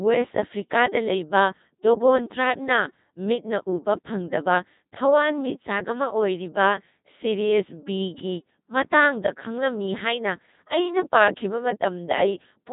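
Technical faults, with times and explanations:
Throughout, Codec 2 vocoder: heavily robotic, buzzy speech rebuilt from sine waves rather than the real waveform, nothing above 3.8 kHz, which fits a 2.4 kbit/s mode.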